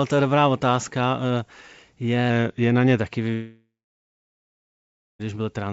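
From 2.30 to 2.98 s the speech slows by about 5.3% and drops roughly a semitone (about 94 cents), then snaps back. This is likely a drift correction step. Speed and pitch move together and hold steady for that stretch, unlike wow or flutter, which waver continuously.

At 3.34 s a long network dropout likely begins. The last sound is stretched into a fading buzz or hiss, and after a few tenths of a second about 1.5 s of near-silence follows. The speech resumes at 5.21 s with roughly 1.86 s missing. A brief packet loss would be concealed within milliseconds, but this gap runs far longer. Through all of this the audio has nothing above 8 kHz, which fits a G.722 call codec.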